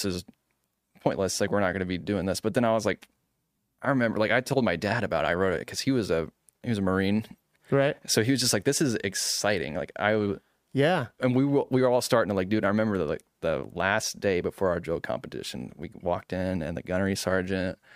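No technical faults are audible.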